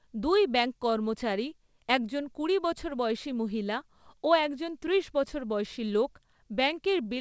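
A speech recording carries clock drift between sender and receiver across its whole length: the sender's clock runs slow by about 2%, so the receiver's jitter buffer keeps draining and has to be refilled. From 0.29 s to 7.06 s this shows up as repeated timing corrections. The receiver keeps repeating short slices of audio, stretching the passage to 98% speed and adding roughly 150 ms in total. These corrections are heard as faint hiccups and a slightly dragging, uneven pace rather than clean dropouts.

On a spectrogram, the harmonic lines of the voice show small, irregularly spaced seams where short pieces reappear. A slice may be duplicated, or the pattern may briefly stall. In the waveform, these are short repeated cycles or tiny kinks at the joins, all lengthening the signal. Nothing is drawn above 8 kHz, a flat ceiling that fits a wideband call codec such as G.722 at 64 kbps.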